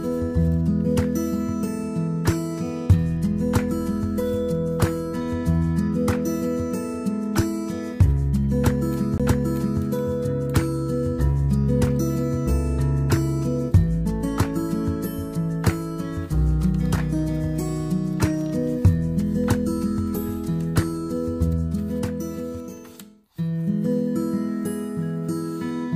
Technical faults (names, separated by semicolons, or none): CD skip